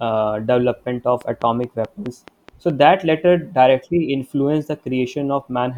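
Speech recording with a train of clicks from 1.21 s to 2.71 s: a regular ticking of about seven near-identical pulses, spaced evenly at roughly 4.7 per second, sitting over the speech and in the gaps alike. The clicks peak around 5 dB above the speech. The steady repetition points to an external source, likely interference from nearby equipment or a faulty connection or power supply.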